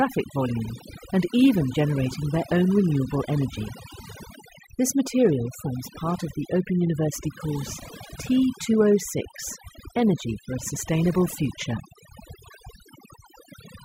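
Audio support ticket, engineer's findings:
Speech, whole clip: background drops and breaks into twinkling, warbling specks. Overdone noise removal. Denoiser set too strong, cutting individual frequency bands near its noise estimate, taking low-level speech detail with them.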